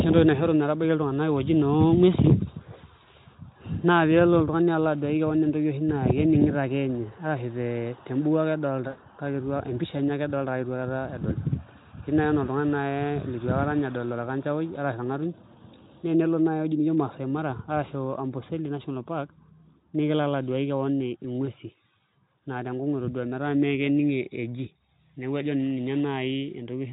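At 8.87 s, right after "arashu te mbuku ake", the speech smears into a stretched buzzy tone or coloured noise that fades out, and it sounds weak for a moment after it returns at 9.00 s. A shorter smear follows at 21.45 to 21.51 s. Both are VoIP packet loss concealed by the speech codec, a gap of about 100 ms and then 20 ms, which fits five and one 20 ms frames. The Speex decoder, itself faint at this bitrate, filled each gap by repeating its last pitch and filter at falling gain.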